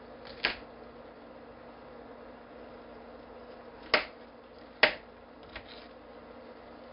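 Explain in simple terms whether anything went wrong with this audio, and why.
The whole clip, from start to finish, carries a gritty hiss that rises and falls with the loudness of the sound, and sudden sharp sounds come out rough and crackly. It is also dull, with nothing above about 5.3 kHz. This is 4-bit ADPCM compression, applied heavily: each sample is stored as a tiny guessed step, so the small errors become hiss, and the step can't grow quickly enough to follow sudden changes.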